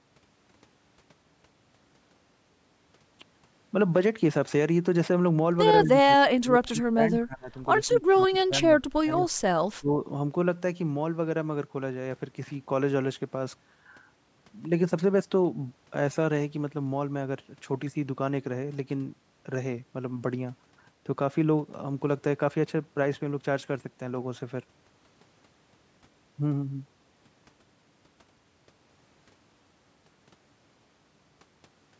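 From 5.84 to 7.01 s, the speech is suppressed in double talk: it drops by up to about 30 dB, likely because the echo canceller could not separate the near talker from loudspeaker echo while both sides spoke, and turned everything down. During that dip, at 6.64 to 6.68 s, a brief echo leak appears: a faint copy about 35 dB below the speech, delayed by 154 ms. It likely comes from loudspeaker sound the canceller did not fully remove. The suppression returns at 7.18 to 7.5 s, 7.87 to 8.02 s, 8.18 to 8.54 s, 8.8 to 9.25 s and 9.8 to 10.02 s, with drops of roughly 15 to 30 dB. The sound dips and cuts out in pieces.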